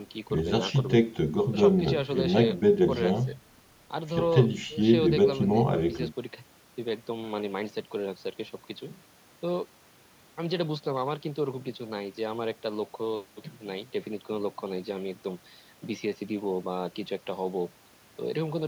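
No technical faults detected.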